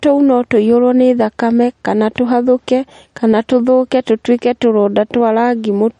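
Speech that has been through low-bitrate audio saved at a high bitrate: nothing sounds above 10.6 kHz for the whole clip, with a dull, swirly coding texture. A spectrogram shows a flat ceiling there. The likely cause is an MP3 near 40 kbit/s later re-saved at around 256 kbit/s.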